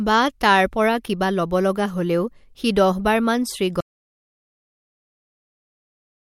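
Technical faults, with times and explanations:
3.81 s to the end, audio dropout to silence: right after "হলেও সি দহবাৰ মান" the speech stops abruptly mid-flow and the last 2.4 s are dead digital silence, with no room tone or background hiss at all. That total absence of noise points to silence being written rather than a natural pause. The likely cause is that the input was lost, through a disconnected device, a failed link or a mute, while recording carried on.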